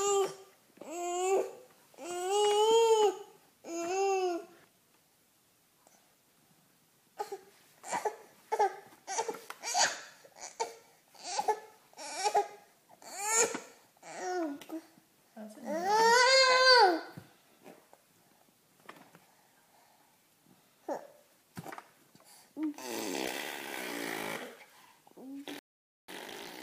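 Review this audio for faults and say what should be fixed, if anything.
A rebuffering stall occurs at 25.59 s: the sound drops to silence and picks up again at 26.09 s from exactly the point where it stopped, so nothing is skipped but about 0.49 s of dead air is inserted. The player drained its store of downloaded audio, halted playback, and waited for more data before continuing. To prevent it, keep a larger playback buffer or use adaptive bitrate switching so delivery stays ahead of playback.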